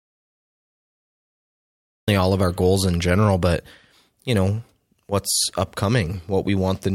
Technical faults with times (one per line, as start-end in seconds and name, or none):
0.00-2.08 audio dropout to silence